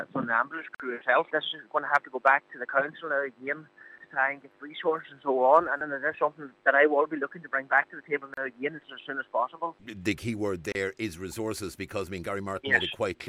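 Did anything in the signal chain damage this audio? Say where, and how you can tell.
Yes. Gaps at joins of encoded pieces appear at 0.75 s (52 ms), 8.34 s (34 ms) and 10.72 s (31 ms). They are sudden silences with smeared edges, and the sound resumes where it stopped. This points to the codec stage: separately encoded segments were joined untrimmed, leaving each run's encoder delay and last-frame padding as silence.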